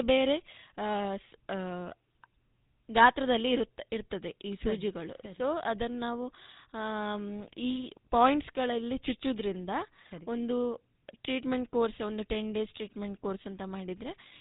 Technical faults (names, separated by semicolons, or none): GSM full-rate codec